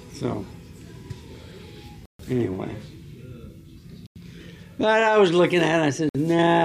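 Silent gaps at 2.06–2.20, 4.07–4.16 and 6.09–6.15 s, likely Bluetooth stalls emptying the headphone buffer, appear as flat waveform stretches and blank spectrogram columns.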